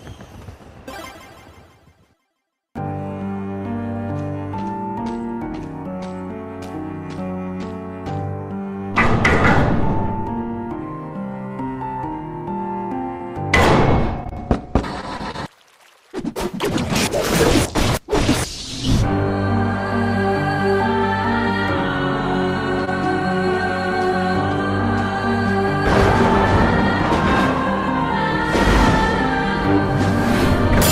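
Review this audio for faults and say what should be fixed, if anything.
Brief smears at 13.17, 14.24, 14.29, 15.17, 15.31 and 16.12 s are short concealed packet loss: about 20 ms went missing each time, and the receiver extended the previous sound to cover it.

A sound held slightly too long at 15.01 and 22.85 s is a short stall from a late packet: the jitter buffer ran empty for about 20 ms, and playback resumed where it had stopped.

To prevent both, give the link more headroom or a deeper adaptive jitter buffer, and add forward error correction so lost or late packets can be recovered.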